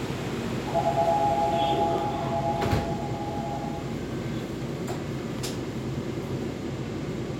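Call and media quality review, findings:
No audible faults found in this everyday sound recording.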